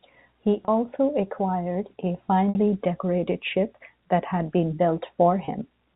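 Packet loss with pitch repetition hits at 0.65–0.68 s, 2.50–2.55 s and 5.45–5.48 s. About 30, 60 and 30 ms are lost. The receiver loops the last pitch period to fill each gap. The two 30 ms gaps sound like a brief held, buzzy tone, while the 60 ms gap fades into silence before the speech returns with a short cross-fade.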